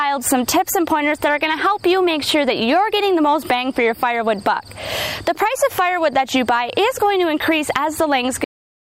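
At 8.44 s there's a cut-off end: the final buffers never got written out, so the sound just stops mid-event. There's no decay or tail, only an abrupt drop to digital silence that runs for roughly half a second until the file ends.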